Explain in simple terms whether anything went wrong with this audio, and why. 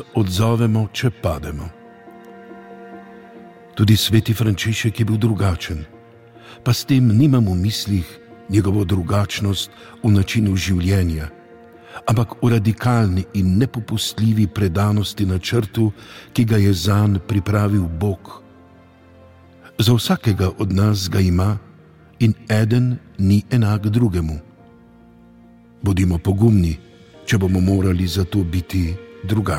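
Nothing went wrong with this audio. No technical fault can be heard anywhere in the recording.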